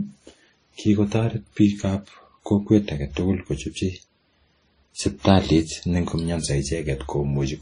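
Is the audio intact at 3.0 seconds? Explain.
No. At 3.0 seconds the speech sounds dull, with nothing above 10.1 kHz and two layers of coding artefacts heard together, a fault present throughout the clip. This is likely transcoding between lossy codecs: the grain fits a low-bitrate WMA-style encode later re-encoded as MP3 at around 38 kbit/s. The second encoder spends its scarce bits reproducing the first one's artefacts while adding its own, and the lower bandwidth limit carries through.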